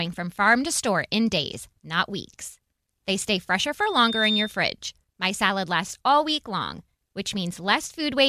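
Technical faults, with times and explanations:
3.80 to 4.59 s, loudspeaker feedback squeal: right after "stay fresher" a piercing tone at 3.6 kHz rises out of the speech, swelling over roughly half a second until it sits about as loud as the talker, then stops. A microphone was hearing the loudspeaker it fed, and at 3.6 kHz the round trip gained more than it lost, so that one frequency kept reinforcing itself with each pass.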